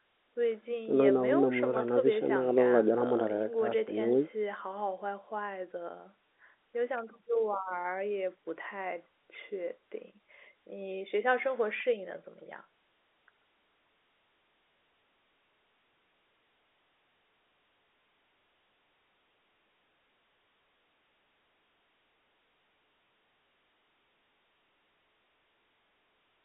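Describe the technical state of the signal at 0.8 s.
At 0.8 s the audio is intact, with the speech carried cleanly through ordinary G.711 telephone coding and its narrow line band of roughly 250 Hz to 3.6 kHz.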